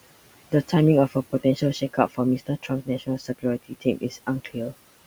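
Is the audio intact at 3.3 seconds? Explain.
No. Speech cut by the noise suppressor runs from 2.39 to 3.44 s, covering 3.3 s. The suppressor mistook parts of the speech for background and turned them down with it, by up to about 17 dB, so roughly a third of a second of softer sounds comes across swallowed or faint.

Noise suppressor artifacts are also present here, as throughout the clip. The suppressor lowers the bands it judges to be steady noise by about 17 dB frame by frame, so the residual room noise dips and swells and can warble.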